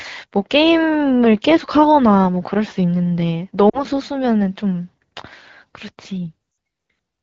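Around 3.70 to 3.79 s there's a short patch of lost AMR speech frames, roughly 40 ms gone, which sounds like two 20 ms frames failing. The decoder papers over them by repeating the last good pitch and vocal tract shape at dropping gain, so you get a quick dip to near silence. It happens again at 6.51 to 6.57 s, about 60 ms this time, a touch longer and again falling to near silence, with the HD Voice coding staying clean around both.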